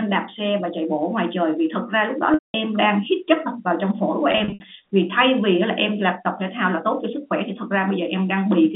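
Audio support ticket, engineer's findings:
Packet loss with pitch repetition, 2.34–2.54 s: 200 ms gap. Receiver concealment loops the last pitch period, so there is a brief held buzz that fades to silence over about 50 ms, then a short cross-fade back. Fits roughly ten 20 ms packets lost in a row.

Packet loss with pitch repetition, 4.32–4.60 s: 160 ms lost in scattered bursts over 280 ms, longest run 60 ms. Repeated short buzzy holds. The looped pitch period, rather than a hard mute or click, marks this as concealment, not a dropout. Audio is band-limited to the 150–3600 Hz G.711 A-law line.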